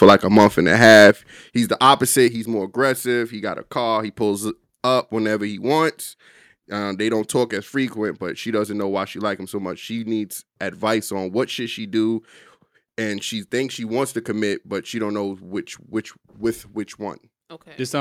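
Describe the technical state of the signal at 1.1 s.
Right after "and a", from 0.82 to 1.1 s, the loudest syllables take on a harsh, crackling edge. This is microphone overload: the input likely drove peaks about 4 dB past the converter's ceiling, flattening their tops on around 7 percent of samples.

At 1.11 s, the voice and the background drop together in one abrupt step of about 8 dB. This is the microphone volume being stepped down, likely the call software cutting the input level in reaction to the clipped peak.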